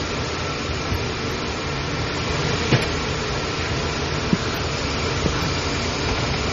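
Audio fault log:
Throughout: MP3 compression, heavy. Nothing is present above 15.2 kHz, and faint components flicker on and off, giving a watery, swirling texture with smeared attacks, which fits a bitrate around 32 kbps. That flickering, absent from a plain low-pass filter, marks a likely lossy encode.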